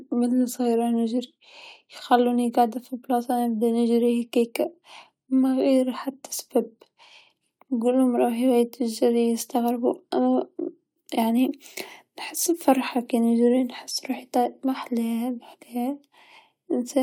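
Nothing goes wrong anywhere in this speech recording, so there's no technical fault to point to.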